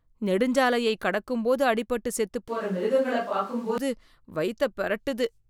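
From 2.48 s to 3.78 s, after "நெடுஞ்சாலையக் கடக்கும்போது அடிபட்டுச் செத்துப்", the speech abruptly turns roomy and hollow with thinner bass, likely a switch to a distant microphone. Unlike added reverb, it brings a room noise floor roughly 30 dB below the speech that starts and stops with the switch, while loudness barely changes.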